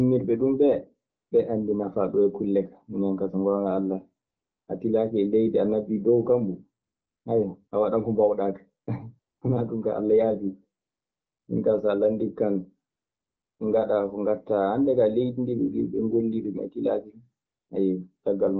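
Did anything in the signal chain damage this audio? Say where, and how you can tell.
Yes, in call processing. The phone's voice activity detection stopped sending speech frames nine times between 1.09 and 17.69 s, for 20 ms to 0.68 s, first after "ɗun ɓee". AMR comfort noise then replaces the real background with smooth, steady hiss that switches abruptly in and out.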